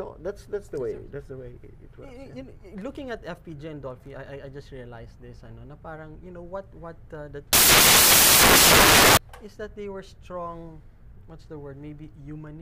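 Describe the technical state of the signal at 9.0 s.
At 9.0 s the signal is inside a stretch of samples built from the wrong bytes, running from 7.53 s to 9.17 s. The bytes of each sample are assembled in the wrong order or alignment, so the rapidly changing low bits land in the most significant position, and the sound is buried under loud, harsh broadband noise.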